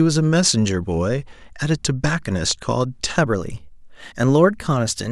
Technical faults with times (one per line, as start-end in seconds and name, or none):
2.51-2.53 loud pop
3.17-5.11 drift correction step